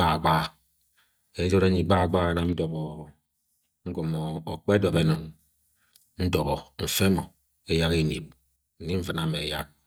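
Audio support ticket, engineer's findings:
Three level dips in the speech, each an abrupt drop of about 6 dB with clean recovery. 2.53–4.93 s, right after "gbahagbaha nam". Again 5.15–5.39 s. Again 8.56–9.59 s, after "mo eyak eneb". Sounds like one channel drops out. Likely a flaky stereo leg, cable or input, going dead intermittently. Mono sum then carries only half the shared signal, hence the 6 dB sag. Anything unique to the lost side vanishes for those stretches.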